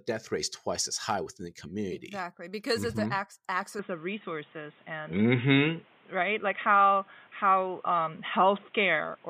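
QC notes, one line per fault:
3.79 to 9.30 s, input switched to a poorer device: the speech abruptly turns dull and boxy with nothing above 3.8 kHz, a modest level shift and a faint new noise floor, with no gap, likely because recording jumped to a narrower-band microphone or headset.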